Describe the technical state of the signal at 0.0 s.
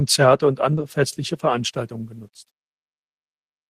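At 0.0 s the speech signal is intact, with no audible fault at that point.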